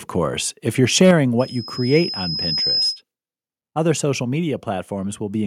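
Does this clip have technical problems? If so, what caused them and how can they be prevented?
Yes. Between 1.01 and 1.11 s the loudest speech peaks are flattened and take on a harsh, crackling edge, with roughly one sample in twenty clipped. This is likely microphone overload: the input was driven about 2 dB past the converter's ceiling. Setting the input gain lower to leave headroom prevents it.

At 1.11 s the whole signal, speech and background together, drops by about 4 dB in one step, and at 2.13 s it drops again by about 3 dB. This is likely the microphone volume being stepped down automatically by the call software after it detected clipping. Correct manual gain avoids the trigger.

From 1.39 to 3.02 s a loudspeaker feedback squeal appears as a single tone at 5.1 kHz. It swells over about a second and a half until it sits about 5 dB above the speech, because the speaker-to-microphone loop has more than unity gain at that frequency. 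Headphones or greater speaker distance prevent it.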